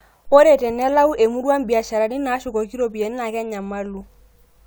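Listening to this short speech recording, nothing technically amiss stood out at any point.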